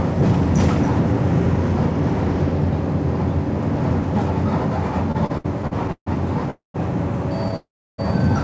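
From 5.12 to 6.08 s there are repeated stalls, a stutter. The sound breaks seven times, the longest gap 141 ms. The receiver ran short of packets and stretched the last sound over each gap. About 325 ms is filled this way, a third of the span. Nothing is lost, but the sound drags.

Two call audio freezes follow, at 6.50 to 6.76 s and 7.56 to 8.00 s. Each time the sound stops and a fading tail fills the pause, which then goes silent: 140 ms of silence in the first, 320 ms in the second. The likely cause is packets held up in transit, which drained the jitter buffer. The sound then resumes where it stopped, nothing missing, only delayed by 237 ms and 421 ms. Through all of this, the G.722 call path passes nothing above 8 kHz.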